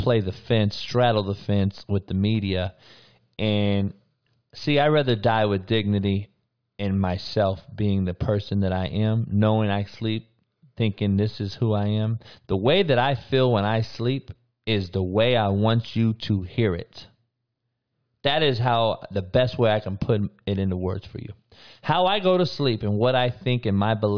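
A recording of speech, with no technical fault to report. No fault can be heard anywhere in it, so there are no times or causes to give.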